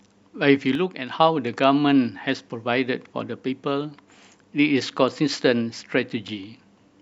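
At 0.75 s the level drops abruptly by about 6 dB, speech and background noise together, and comes back up at 1.2 s. That's a sudden gain jump, likely a gain setting or bit shift applied instantly with no ramp, so both edges of the dip land hard.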